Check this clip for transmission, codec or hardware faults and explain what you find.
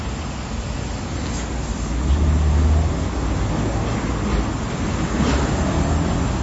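One codec fault is present. MP3 compression, throughout the clip: nothing is heard above 7.7 kHz, a hard treble ceiling, and the coding damage is plainly audible, which points to MP3 encoding at a low bitrate, likely around 32 kbps. With so few bits, the encoder discards the upper band entirely and drops weaker frequency lines, which then flicker in and out from frame to frame. The result is dull, band-limited sound with a watery, swirling texture and smeared attacks.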